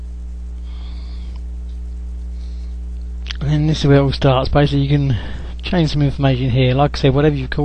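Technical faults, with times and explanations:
Throughout, mains hum: a ground loop or a nearby transformer is leaking the 60 Hz power line into the signal path, so a steady low tone sits under the entire clip with a few low harmonics, loud and close behind the audio, roughly 10 dB below it.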